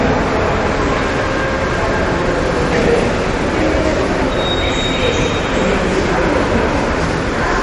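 From start to finish the treble stops dead at 10.6 kHz, and weak detail flickers in and out with a watery, swirling texture and smeared attacks. This is likely MP3 compression, with clearly audible damage that fits an encoder starved of bits at around 40 kbps.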